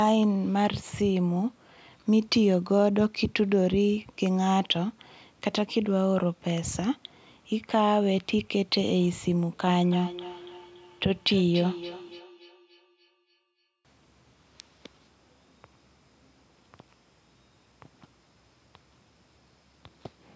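Feedback echo between two devices runs from 9.91 to 14.67 s: a second device in the room replays the speech, whose microphone recaptures it beyond its own echo canceller's reach, so thin, ringing repeats arrive roughly every 0.3 s, peaking about 15 dB below the speech.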